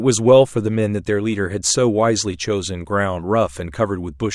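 No technical faults can be heard in the speech. There is no moment in the recording that calls for a time or a description.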